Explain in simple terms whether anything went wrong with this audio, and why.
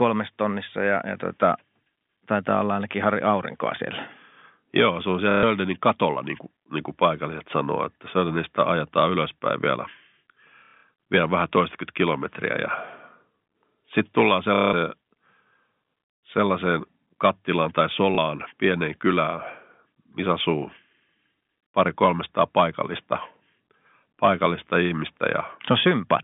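Yes, something went wrong: there's packet loss with the last packet repeated. Bits of the audio never arrived, so the phone line, which already has that narrow telephone sound, kept replaying the last chunk it had. You hear a short robotic stutter with a low buzz, which fits chunks of about 30 ms. It happens at 5.31–5.43 s, after "se on"; at 10.59–10.83 s, in patches just before "vielä vähän toistakymmentä kilometriä"; at 14.55–14.73 s, after "sitten tullaan"; and briefly at 18.15–18.18 s.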